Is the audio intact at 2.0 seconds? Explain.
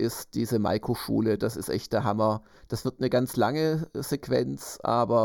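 No. At 2.0 seconds, and throughout the speech, one channel arrives late by only a fraction of a millisecond, around 0.2 ms, and the two channels are summed to mono. This channel delay causes comb filtering: content shared by both channels cancels at evenly spaced frequencies, with the first notch near 3 kHz and further notches repeating above it. The speech therefore sounds hollow and phasey, with fixed gaps carved out of its upper range.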